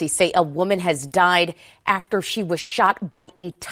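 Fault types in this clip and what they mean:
Short concealed packet loss: a few hundredths of a second of the call arrived too late for the decoder, and the receiver carried the last sound forward, as a pitched continuation if voiced or shaped noise if not, then blended back. Here it happens twice, at 1.07 s and again at 3.51 s, each covering 40 ms and showing as a brief smear. Unlike a burst, the fill is too short to fade into a held buzz or hiss.
Burst of packet loss: a run of packets was lost or came too late, leaving a gap the receiver filled by continuing the last sound and turning it down as the gap went on, so a voiced sound becomes a held buzz and other sounds a fading hiss. Here it occurs at 1.99 s, just before "she was", at 2.59 s, just after "she was", and at 3.35 s, filling 80, 120 and 80 ms, with the same length of audio missing each time. The fill fades over the gap rather than being a quick smear.
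Long network dropout: the sound at 3.11 s, right after "she was", is a 160 ms stretch filled by a continued, fading version of the last sound, with no silence, and the speech then resumes further on with 160 ms missing. The likely cause is a longer interruption in the network than the bursts. What separates it from a burst is its greater length, the longest fill in the clip.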